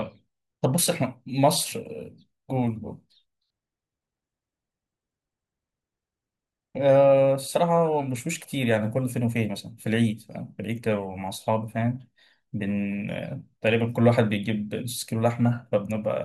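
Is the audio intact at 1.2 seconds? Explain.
Yes, the audio is intact at 1.2 seconds, with no dropout, click, distortion or other fault audible there.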